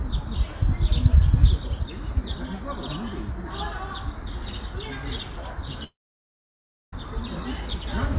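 A recording of everyday sounds, band-limited to 4 kHz by what sounds like a G.711 A-law call codec, breaks off from 5.84 s to 6.93 s in what is likely a long network dropout. About 1.09 s of audio never arrives. The last sound smears into a brief fading buzz or hiss, then roughly a second of near-silence follows before the sound resumes with that stretch missing. On a waveform this appears as a flat gap; on a spectrogram, a dark vertical band.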